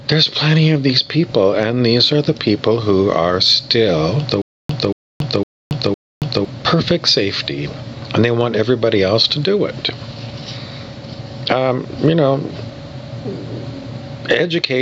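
Gain pumping runs through the whole clip, with the level swinging by around 15 dB. The likely cause is gain set far too high, with a fast limiter clamping every peak and flattening dynamics.

Stutter with silent gaps appears from 4.42 to 6.45 s. A 0.23 s fragment repeats four times, each followed by about 0.28 s of digital silence, a 0.51 s cycle. Playback likely stalled and replayed its last buffer on each retry, losing the audio meant for that span.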